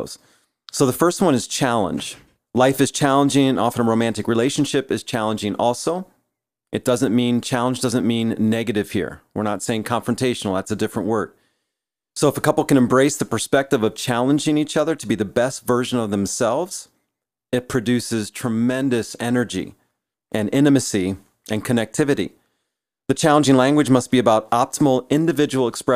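A speech recording, and nothing is technically wrong with it.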